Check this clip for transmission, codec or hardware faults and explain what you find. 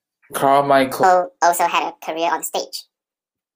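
One fault: a section at the wrong speed. From 1.03 s to the end, the speech runs 1.63 times too fast, likely from playback against the wrong clock. The voice rises roughly ten semitones and hurries, unlike a pure pitch shift where the timing stays unchanged.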